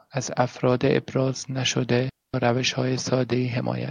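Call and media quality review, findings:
Digital wireless dropout at 2.09–2.34 s: clean near-silent hole of about 250 ms, no noise burst either side. Receiver muting after excessive data loss on the digital radio link.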